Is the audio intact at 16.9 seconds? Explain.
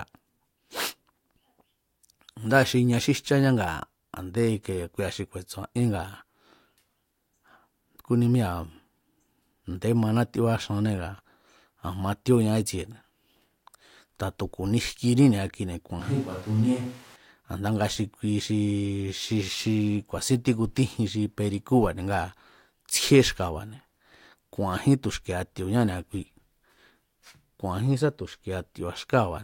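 No. From 16.00 to 17.16 s, just after "kuni jkiní ni̱a kuine̱", there is a switch to a distant microphone, likely because the close mic's signal dropped out. The speech turns roomy and hollow, loses bass, falls about 5 dB, and carries room noise near 25 dB below it, snapping back before "a̱nda nga xi kui".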